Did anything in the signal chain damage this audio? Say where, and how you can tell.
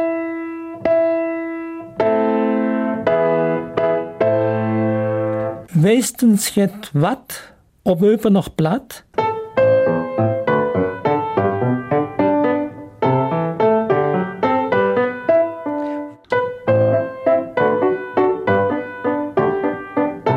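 No, nothing I can hear points to any stage of the chain having damaged this audio, so there's nothing here to chase down.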